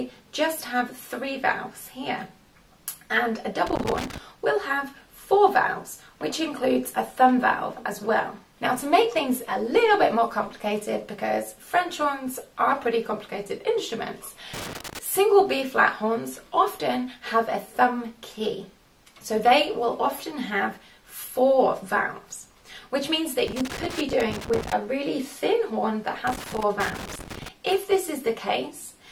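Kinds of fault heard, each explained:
Loose connector crackle: a worn or dirty contact keeps making and breaking, chopping the signal into irregular bursts of scratchy crackle. It comes in four bursts: 3.67 to 4.18 s, 14.54 to 14.99 s, 23.47 to 24.73 s, and 26.27 to 27.49 s.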